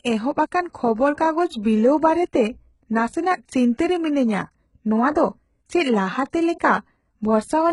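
From start to finish the speech carries heavy damage that is likely HE-AAC compression, consistent with a very low bitrate around 12 kbps. Nothing reaches above about 11.1 kHz, yet the upper band still has treble. That treble is rebuilt by copying lower bands upward, so its harmonics don't line up, leaving s sounds gritty, metallic and lispy. A plain low-pass would sound dull instead, and ordinary MP3 damage would smear without this synthetic, misaligned shimmer.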